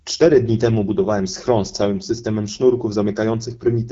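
Throughout, the speech sounds rough and raspy with nothing above 7.5 kHz, the mark of the AMR wideband (HD Voice) codec at 8.85 kbit/s, one of its two lowest rates.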